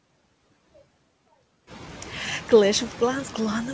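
Noise suppressor artifacts run through the whole speech clip. The suppressor estimates which frequency bands hold steady noise and pulls them down by about 17 dB in each frame. The background sinks in the gaps between words and comes back up underneath them. The noise floor rises by about 11 dB around 1.5 s. Because the dips track the speech frame by frame, the effect differs from a noise gate, which switches on and off abruptly. It also differs from codec noise, which follows the speech itself rather than the pauses. Nothing is heard above 8 kHz, which fits a wideband G.722 call path.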